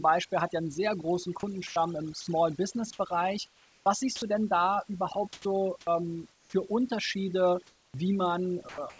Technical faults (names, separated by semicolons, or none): overdone noise removal; comfort noise in place of the background; sound dropped by the voice detector; sound chopped by the voice detector